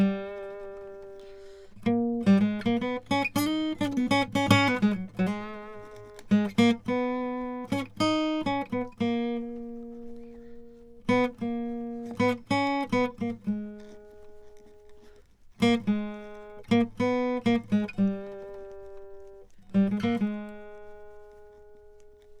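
Nothing technically wrong turns up in this music clip, with no dropouts, clicks, distortion or other glitches to point to anywhere along the way.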